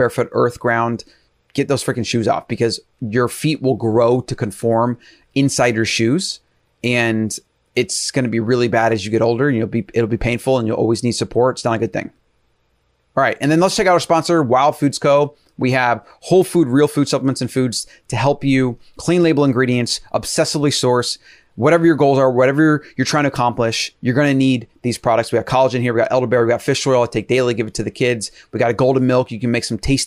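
No technical faults are audible.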